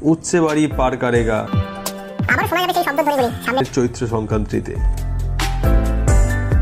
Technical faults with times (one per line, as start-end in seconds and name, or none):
1.47-3.60 audio read two samples at a time (double speed)